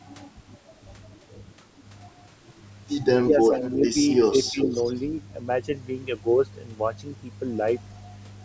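Speech recorded through a call's microphone path, with nothing above 8 kHz. Between 3.3 and 4.68 s the talker dips in level at 3.3–3.55 s (about 5 dB), 3.81–3.97 s and 4.51–4.68 s (about 10 dB each). This is speech suppressed in double talk, likely an echo canceller ducking both sides during overlap. The dips are partial level drops, not the abrupt silent gaps of packet loss. Echo leak appears at 3.31–3.37 s (about 20 dB down), 3.55–3.71 s and 4.23–5.02 s (about 15 dB down). It is a faint copy of the voice arriving 355 ms late, likely from loudspeaker pickup the canceller missed. Its fixed, distinct delay separates it from room reverberation, which would trail off smoothly.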